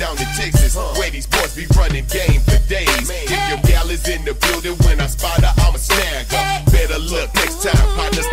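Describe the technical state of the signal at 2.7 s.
At 2.7 s the signal is intact, with no audible fault at that point.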